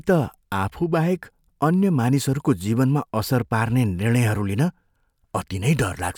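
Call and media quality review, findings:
No faults found on the speech signal; level, continuity and timing hold steady throughout, with nothing in the transport or playback chain calling for follow-up.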